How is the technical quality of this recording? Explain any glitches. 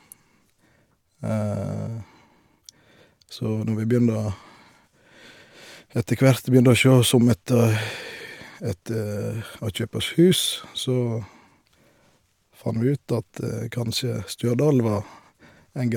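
No glitches to report: the speech runs continuously with no dropouts, clicks, distortion or level jumps audible anywhere in the recording.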